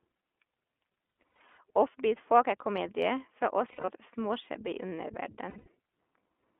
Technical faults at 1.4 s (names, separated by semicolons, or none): iLBC codec; lost iLBC frames